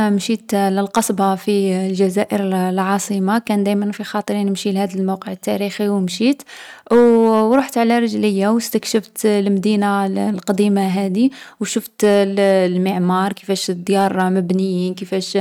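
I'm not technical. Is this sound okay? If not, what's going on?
No, there's hard clipping all the way through the speech. The recording was pushed a bit louder than the equipment could handle, so the loudest moments get chopped flat. It's only a small fraction of the sound, but you'll hear brief crackly roughness on peaks.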